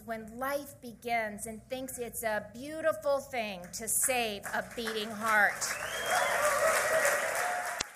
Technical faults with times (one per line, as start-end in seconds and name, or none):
7.77-7.82 damaged data in a compressed stream